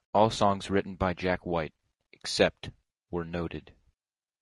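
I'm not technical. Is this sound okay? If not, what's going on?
No. The speech sounds rough and grainy from start to finish, with a hiss between the tones of the voice and dull or artificial-sounding top end. That is likely low-delay AAC compression, the kind video calls use, squeezing the audio too hard.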